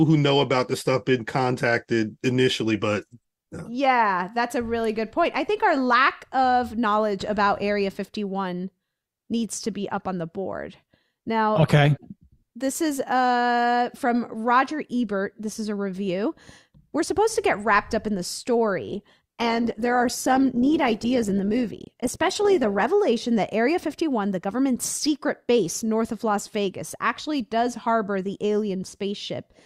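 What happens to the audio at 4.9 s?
Nothing goes wrong at 4.9 s; the speech plays through that moment intact, with no dropout, click, glitch or other audible fault.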